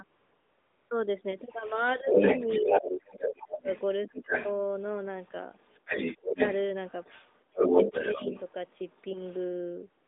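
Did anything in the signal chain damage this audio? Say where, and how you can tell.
Yes. Three kinds of fault, all in call processing on a narrowband mobile link, with the band limited to roughly 250 Hz to 3.6 kHz.

AMR comfort noise appears from 0.04 to 0.90 s and again in the last 0.04 s from 10.04 s. The sender stopped transmitting speech frames, and the receiver synthesised smooth, steady noise in their place. A spectrogram shows a featureless, uniform noise block with hard edges instead of the real background.

The other side's voice leaking through runs from 1.33 to 9.49 s, roughly as loud as the main talker or a little louder. It is likely residual loudspeaker echo that the echo canceller failed to subtract from the microphone. On a spectrogram, a second, overlapping harmonic pattern sits alongside the main speech.

Speech suppressed in double talk occurs at 2.02 to 3.69 s, 4.08 to 4.29 s, 6.22 to 6.39 s and 7.47 to 8.24 s, with dips of roughly 15 to 30 dB. 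The likely cause is the canceller attenuating everything while both sides spoke at once. The waveform envelope shows sudden notches during the overlaps.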